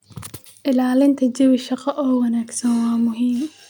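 No technical faults can be heard anywhere in the speech recording.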